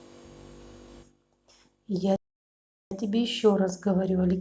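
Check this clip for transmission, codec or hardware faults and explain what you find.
One fault is present: a playback stall in this speech clip. From 2.16 to 2.91 s the speech stops abruptly for about 0.75 s, then resumes. The likely cause is the player running out of buffered data or its output thread being blocked, so nothing reached the output until it recovered. On the waveform this is a flat line cutting straight through the speech, and on the spectrogram a clean vertical band of empty silence across all frequencies.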